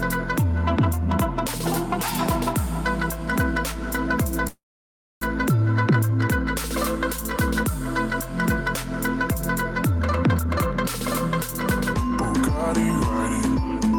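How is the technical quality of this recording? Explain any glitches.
The recording has three network-related glitches: one stall and two short bursts of hurried playback.

From 4.47 to 5.23 s there is a call audio freeze. The last sound is stretched into a brief fading buzz that drops to near silence for about 0.62 s, likely because packets stalled in transit and the jitter buffer emptied. Unlike a dropout, nothing is lost. When the audio returns it picks up exactly where it stopped, so the pause only pushes everything after it about 0.74 s later.

The jitter buffer speed-ups come at 10.43 to 10.51 s and at 13.47 to 13.92 s. The first is abrupt, running at 167% speed and cutting roughly 70 ms. The second is gentler, at 110%, removing around 50 ms. In both, the receiver trimmed tiny pitch-period slices to drain excess buffered delay, so the sound rushes forward while its pitch stays the same. 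That unchanged pitch is what separates it from a sped-up playback or resampling error.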